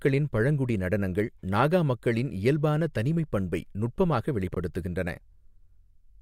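At 4.52 to 4.57 s, chunks play out of order. A 21 ms chunk arrives one chunk late, swapping places. Three hard joins give a brief jumbled moment.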